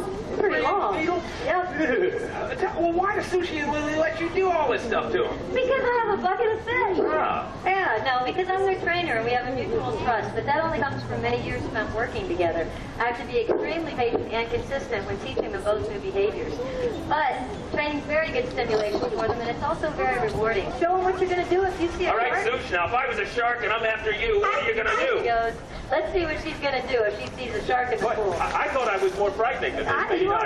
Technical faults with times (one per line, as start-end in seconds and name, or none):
7.54 compressed frames skipped
10.76 compressed frames skipped
13.97 compressed frames skipped
30.17 compressed frames skipped